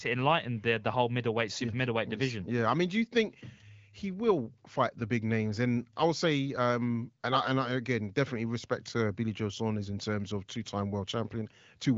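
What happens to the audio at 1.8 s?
Nothing goes wrong at 1.8 s; the speech there comes through intact, carried by the AMR wideband (HD Voice) codec at 15.85 kbit/s with its usual band limit around 7 kHz.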